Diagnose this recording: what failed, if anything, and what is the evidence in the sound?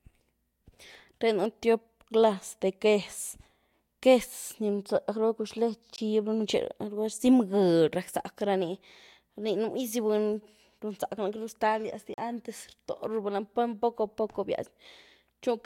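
Driver or buffer stage: blocks of digital silence at 5.96–5.98 s and 12.14–12.18 s (20 and 40 ms), likely where unfilled output buffers were zeroed, leaving short holes.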